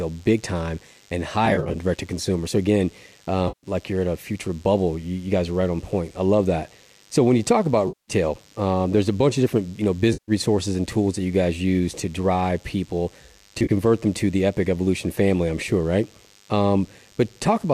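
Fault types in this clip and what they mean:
DECT cordless phone buzz: a DECT handset or base nearby is firing a radio burst every 10 ms, and the audio circuitry is rectifying it. The result is a thin, steady 100 Hz buzz full of harmonics, sitting roughly 35 dB under the speech throughout.
AAC frame loss with concealment: bits of what is likely a low-delay AAC stream went missing, and the decoder filled the gaps from the last good spectrum. That gives brief smeared, phasey patches around 1.46, 3.48, 7.88, 10.13 and 13.59 s, each about 0.1 to 0.3 s long.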